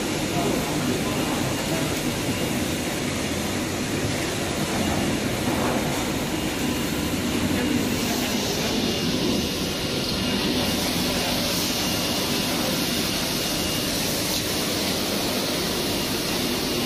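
No technical faults can be heard anywhere in the audio, and the signal holds steady throughout without any dropout, interruption or disturbance.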